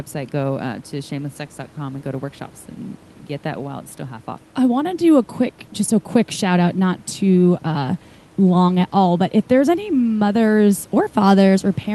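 No technical faults are audible anywhere in this speech.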